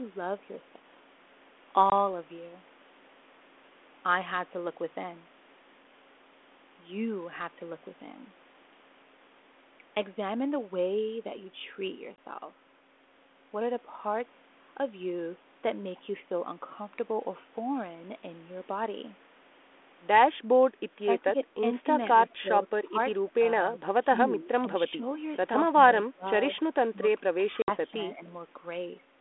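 At 1.90 s, and again at 12.16 s, a hard-edged silent gap of about 20 ms cuts into the speech. This is packet loss on an ADPCM call, one packet each time. The decoder's adaptive predictor and step size drift from the sender's, so the sound resumes slightly distorted, then settles within tens of milliseconds.

From 21.04 s the talker is repeatedly pulled down in pieces, at 21.04–21.38, 21.82–22.09, 22.42–22.98, 23.29–25.04 and 26.06–28.22 s. The drops reach about 5 to 10 dB, and about 20 dB in the last stretch. This is speech suppressed in double talk, likely the echo canceller ducking the near talker while the far side speaks.

Within that final stretch, 27.62–27.72 s brings a longer 60 ms hole, which fits three lost 20 ms packets. It has the same abrupt edges and the same briefly disturbed recovery.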